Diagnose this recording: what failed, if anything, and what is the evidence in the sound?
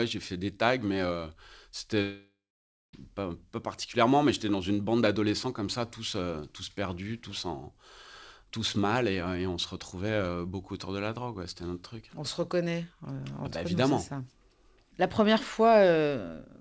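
From 2.02 to 2.95 s the sound smears into a fading buzz, then about half a second of silence before "pas pas particulièrement mais". This is likely a long network dropout, with the receiver concealing lost packets.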